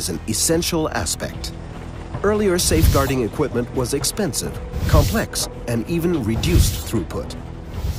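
No technical faults can be heard in the clip, so there are none to describe in time order.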